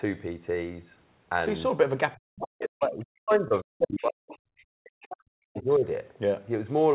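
Speech suppressed in double talk runs from 2.14 to 4.31 s. The speech dips and breaks up in pieces, at its deepest by about 40 dB and for around two seconds in total. The likely cause is both sides talking at once, so the echo canceller could not tell this talker from the loudspeaker echo and turned everything down together.

The other side's voice leaking through appears inside that stretch at 3.30 to 3.34 s as a faint scrap, about 25 dB below the speech. The far talker's voice, played on this device's loudspeaker, was likely not fully cancelled from the microphone, so brief fragments of it come through.

Short concealed packet loss follows at 3.48 to 3.52 s. About 20 ms of audio never arrived in time, and the receiver filled roughly 22 ms by carrying the previous sound forward before blending back. It is heard as a short smear.

Leakage returns at 3.94 to 4.04 s, now strong at only about 10 dB below the speech. 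It is heard again at 4.30 to 4.38 s, about 25 dB down, and at 4.57 to 4.64 s, barely audible at about 35 dB down.

A second stretch of double-talk suppression runs from 4.82 to 5.85 s. The speech drops again by up to about 40 dB, for around a second in total.

Within it, at 5.57 to 5.75 s, the other side's voice leaks through once more, about 25 dB below the speech. All of this sits in a narrow band with nothing above 4 kHz, which fits a 64 kbps mu-law telephone codec.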